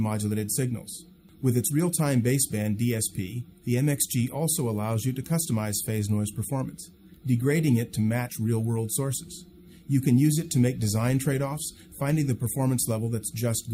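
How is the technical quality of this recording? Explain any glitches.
I can't hear any technical faults in this recording. There are no glitches to explain.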